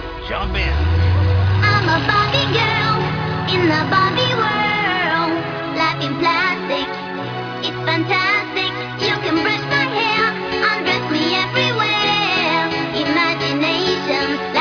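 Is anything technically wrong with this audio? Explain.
No, nothing stood out as technically wrong on listening.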